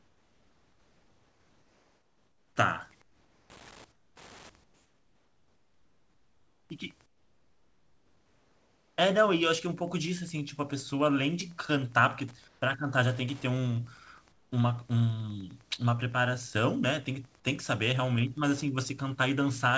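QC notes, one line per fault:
Throughout, Wi-Fi interference: a steady ticking runs under the speech about ten times a second, roughly 35 dB below the signal, with the regularity of a 102.4 ms beacon. A nearby Wi-Fi radio's bursts are being picked up and rectified by the audio circuitry, so each beacon becomes an audible tick in the band. Because it sits well under the speech, it is most exposed in the pauses, where the room background is otherwise quiet.
0.00–2.56, 3.02–3.50, 3.92–4.16, 4.64–6.70, 7.06–8.98, 12.48–12.62, 14.32–14.52, comfort noise in place of the background: in each pause the real room background, sitting about 40 dB under the loud passages, turns into a smooth, featureless hiss that drops by about 2 to 10 dB, most sharply at 3.92 s. The likely cause is discontinuous transmission, with the receiver filling the silent gaps with synthetic noise until the speech resumes. The band-limited character of the call path, with nothing above 8 kHz, is heard throughout.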